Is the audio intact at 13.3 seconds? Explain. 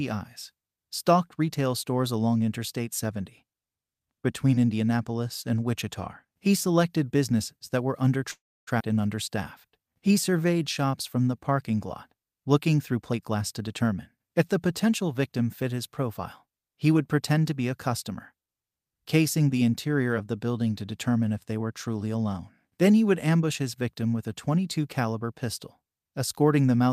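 No, 13.3 seconds falls inside a jitter buffer speed-up that runs from 12.93 to 13.83 s, ending just before "if the potential victim". The receiver's buffer had filled beyond its target, so it trimmed short slices of one or a few pitch periods again and again, cutting around 200 ms in total. The speech plays at about 119% speed with unchanged pitch, so this stretch sounds clearly hurried.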